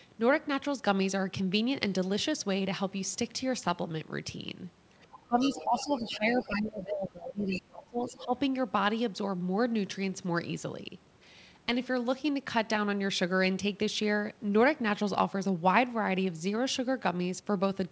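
From 5.11 to 6.48 s, and again at 7.51 to 7.59 s and 8.09 to 8.25 s, the other side's voice leaks through. A second voice sits beneath the speech, first about 15 dB down, then louder, then fainter, most likely loudspeaker echo the canceller failed to remove.

Overlapping this, the speech is suppressed in double talk, briefly at 5.27 to 5.39 s and then through 5.55 to 8.34 s, with drops of up to about 20 dB over roughly two seconds in total, likely because the canceller ducked the talker along with the echo. Unlike the leak, which adds a voice, this removes level from the main talker.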